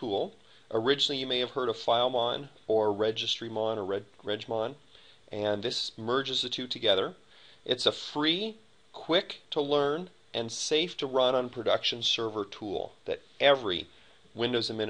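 No technical faults can be heard anywhere in this recording.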